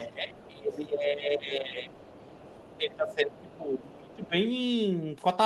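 Right from the start, 0 to 1.92 s, the speech sinks, dropping by something like 15 dB at worst. That's speech suppressed in double talk, likely the echo canceller ducking everything because it couldn't tell this talker apart from the far end playing back at the same time. Inside that stretch, at 0.38 to 0.48 s, there's a faint scrap of the other side's voice leaking through, sitting roughly 25 dB under the speech, likely residual loudspeaker echo the canceller didn't fully strip from the mic. The leak comes back for longer from 1.91 to 2.78 s at about the same low level, likely the same residual echo. Then from 2.78 to 4.33 s the speech is pulled down again, harder this time, around 20 dB at the deepest point, likely the same double-talk suppression kicking in. While that's happening, little bits of the far-end voice poke through at 3.38 to 3.53 s, 3.81 to 3.87 s and 4.11 to 4.28 s. They're quieter still, roughly 30 to 35 dB below the speech, likely leftover echo slipping past the canceller.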